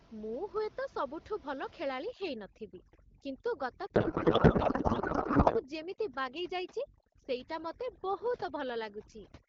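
From 2.06 s to the end, overdone noise removal pulls individual frequency bands down whenever they sit near the room noise, which was about 19 dB below the speech. Quiet parts of the speech vanish along with it. The background collapses into near silence with twinkling specks. On a spectrogram the noise floor becomes dark, dotted with isolated bright flecks.

From 3.95 s to 5.64 s, a codec payload misread replaces the speech with garbled noise and warble. Octet-aligned AMR-WB frames are being unpacked as bandwidth-efficient, so every field lands in the wrong place. The waveform shows a block of erratic energy unrelated to the surrounding speech envelope, and the spectrogram shows smeared, structureless texture in place of harmonics.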